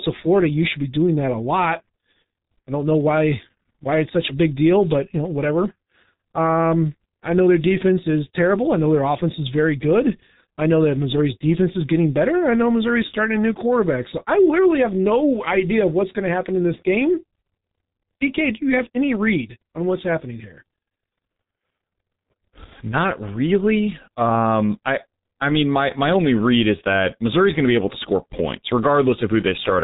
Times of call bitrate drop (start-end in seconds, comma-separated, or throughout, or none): none